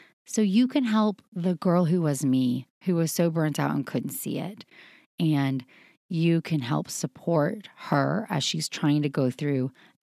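No technical faults are audible.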